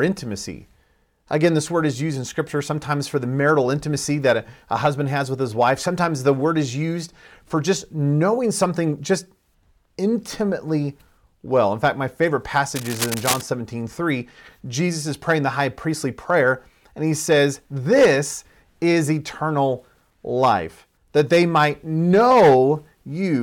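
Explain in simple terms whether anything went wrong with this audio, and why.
Right after "fact my favorite", from about 12.75 to 13.41 s, a burst of scratchy, rustling noise sits almost as loud as the speech itself. That's cable scratch noise, likely from a worn cable or connector being moved so its electrical contact kept flickering.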